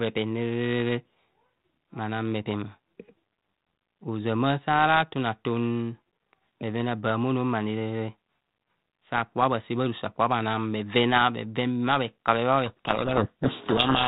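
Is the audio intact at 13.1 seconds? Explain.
No, codec payload misread runs from 12.66 s to the end of the clip at 14.08 s, so 13.1 s falls inside it. The decoder still accepts each G.726 code word but unpacks its bits in the wrong order, so every sample is rebuilt from a wrong difference value and the adaptive prediction drifts off course. The speech, band-limited by the 32 kbit/s G.726 path before this point, is buried in harsh distortion throughout.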